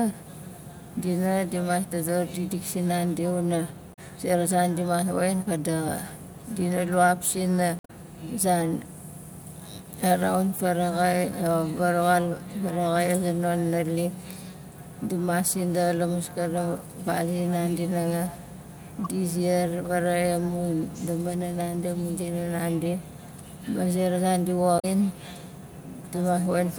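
A speech clip with four short bursts of damaged data in the compressed stream: at 3.90–3.99 s after "dodor dikdik sinandi wana", 7.77–7.90 s, 19.04–19.06 s before "di ziar faraxai amun", and 24.76–24.85 s after "ma zera zan di". Each is a short glitch where the decoder hits corrupted frames and loses sync until the next header.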